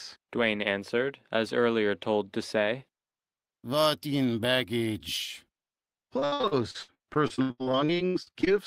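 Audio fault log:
6.19–8.48 s, repeated packet loss (robotic sound): the speech turns choppy as packets keep dropping, about twenty holes, the longest around 82 ms. Each gap gets papered over by stretching the last bit of sound, so over a third of that stretch is concealment.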